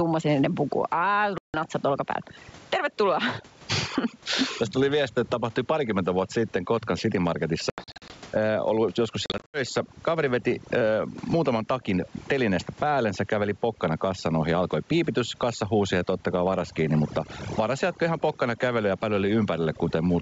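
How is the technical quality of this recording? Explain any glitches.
The technical quality is poor: the speech is processed throughout and drops out three times.

Overdone noise removal runs through the whole clip. The background is near silence with twinkling specks. A noise reduction setting that is far too strong cuts individual frequency bands whenever they come close to its noise estimate, and it removes quiet parts of the speech along with the noise.

Gain pumping is also present throughout. The level swings by about 15 dB, so the speech sounds squashed. The likely cause is input gain set far too high, with a fast limiter or compressor pulling it back on every peak.

Packet loss on an ADPCM call causes three dropouts. From 1.38 to 1.57 s, between "puku ai" and "natsat olkapäällä", there is a hard-edged hole of 160 ms, which suggests several consecutive packets went missing. From 7.70 to 8.11 s, just before "ollut joskus", 220 ms are lost in scattered gaps spread over 400 ms, the longest lasting 80 ms. 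From 9.26 to 9.61 s, right after "ollut joskus", 180 ms are lost across 280 ms, again with runs up to 80 ms. Each gap is filled with silence. The decoder's adaptive predictor and step size then drift out of step with the sender's, so the speech comes back with some distortion, settling within a few tens of milliseconds.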